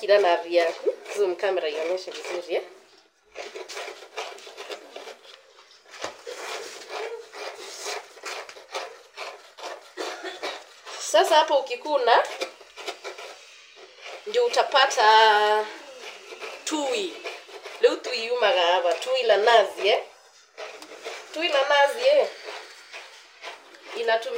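Throughout, the top end sounds dulled, with a faint metallic shimmer from mirrored images between 12 and 24 kHz, roughly 30 dB down: imaging from linear upsampling, 24 kHz to 48 kHz.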